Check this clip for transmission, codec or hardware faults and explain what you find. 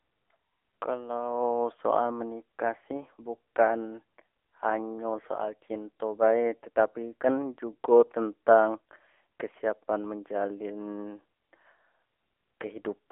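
One fault runs through the whole clip: AMR narrowband mobile codec damage. The speech sounds thin, boxy and plainly buzzy, confined to roughly 300 Hz to 3.4 kHz with nothing above 3.6 kHz. That fits AMR-NB at a low mode near 8 kbps, where few pulses drive the vocal-tract model.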